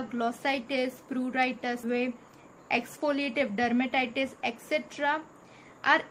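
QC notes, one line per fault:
1.83–1.85 s, skip ahead: about a second of audio vanishes and playback jumps forward with no silence filling the join, so the two sides butt straight together. Unlike a dropout or packet loss, there is no gap or concealment. The material is simply gone, as when late audio is discarded from an overfull buffer.
1.93–3.87 s, jitter buffer speed-up: the audio then runs about 9% fast while keeping its pitch, shedding roughly a fifth of a second in total as the receiver trims short pitch-period slices to drain its backlog. The unchanged pitch separates it from a sample-rate error, which would raise the pitch along with the speed.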